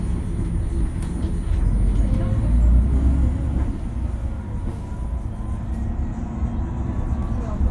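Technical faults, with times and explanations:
No technical faults detected anywhere in the recording.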